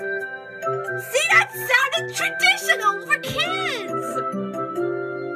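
No technical faults are audible anywhere in the recording.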